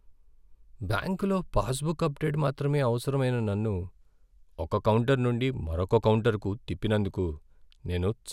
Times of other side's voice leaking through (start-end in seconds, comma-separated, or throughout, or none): none